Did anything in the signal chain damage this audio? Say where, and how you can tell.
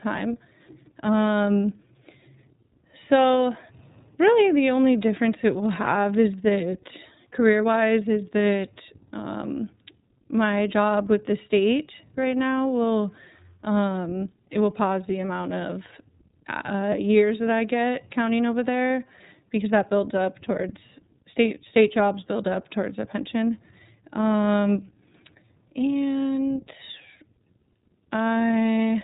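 Yes, at the codec stage: the speech runs through an iLBC codec for the whole clip. Nothing above 3.8 kHz survives, and the voice has a plainly audible rough, slightly synthetic grain. iLBC codes each frame's excitation independently, and the texture fits 30 ms frames at roughly 13.33 kbps. A simple telephone-band filter would dull the sound without that graininess, and packet loss would leave isolated gaps rather than a steady coding roughness.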